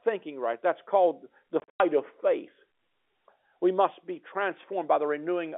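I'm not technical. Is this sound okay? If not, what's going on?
No. Between 1.6 and 1.8 s the speech gets chopped by little gaps of dead silence. That's packet loss filled with silence: chunks of the call went missing, about 160 ms in all, longest gap 100 ms, which fits 20 ms packets.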